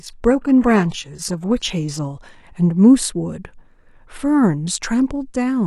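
For the first 2.0 s the player is an adaptive stream starting at a low bitrate, then steps up once it has gauged the connection. The speech's treble sounds synthetic and artefacts are stronger, which fits HE-AAC near 16 kbit/s. At 2.0 s quality jumps without a gap, suggesting AAC-LC around 96 kbit/s.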